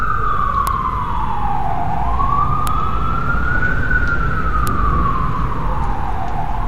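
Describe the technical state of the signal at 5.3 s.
At 5.3 s the signal is intact, with no dropout, clipping, distortion or other technical fault to be heard at that point.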